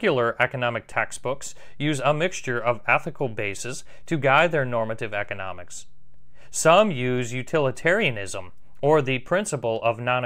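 At 0.92 s a DC step occurs in the speech. The waveform's zero line jumps to an offset of about -34 dBFS and stays there. A low thump marks the jump. At 9.28 s the offset steps back with a second thump. The speech runs on unchanged.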